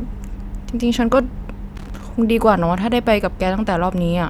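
Loose connector crackle runs from 1.76 to 2.03 s: a worn or dirty contact intermittently breaks the signal path, chopping the speech into an irregular burst of scratchy crackle.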